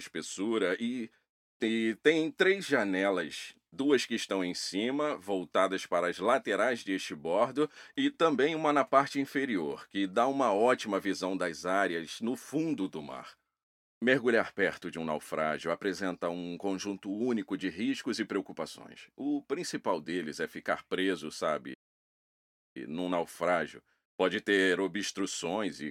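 The audio cuts to silence in mid-flow at 21.73 s and returns at 22.77 s, a playback stall of about 1.0 s. The likely cause is the player running out of data or its thread being blocked. A full second of dead silence sets it apart from the brief gaps of a dropout.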